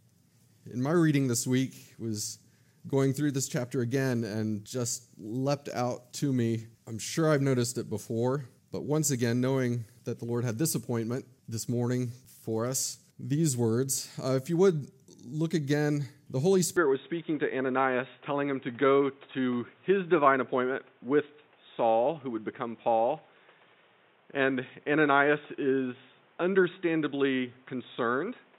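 From 16.77 s to the end, the audio abruptly turns dull and boxy, with nothing above 3.8 kHz, no gap at the transition, and a new background noise roughly 35 dB under the signal while overall loudness stays about the same. This points to an input switched to a poorer device, likely a headset's call profile or another microphone. A spectrogram would show the upper band cut off sharply at 16.77 s; the waveform envelope would show no level step.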